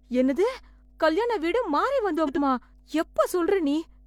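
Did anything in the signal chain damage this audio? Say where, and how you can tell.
Yes. Mains hum, from the analogue wiring. A steady 50 Hz tone runs through the whole clip, about 30 dB below the speech. A ground loop or transformer couples it in.

Frames out of order, at the network stage. From 2.18 to 2.39 s, two neighbouring runs swap places. The speech flutters. No time is lost.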